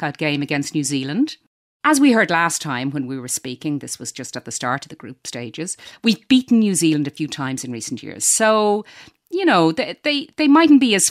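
No dropouts, clicks, distortion or other technical faults are audible anywhere in this speech recording.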